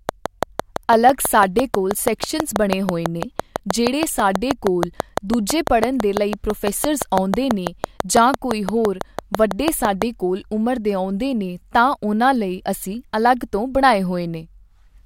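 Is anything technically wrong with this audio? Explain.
Yes. From 0.09 s to 10.03 s a train of clicks runs over the speech, about six per second at a steady, regular spacing, around seventy in all, with peaks roughly 20 dB above the signal. The clicks share one shape and keep going through pauses, so they are added on top of the recording rather than part of it, likely interference from nearby equipment or a faulty connection or power supply. The result is a loud, even ticking throughout the first ten seconds.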